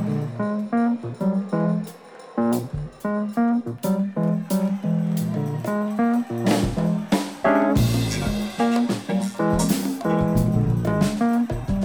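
No audible technical faults.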